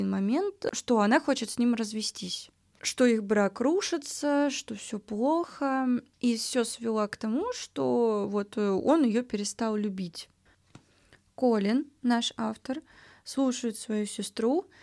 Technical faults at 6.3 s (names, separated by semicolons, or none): none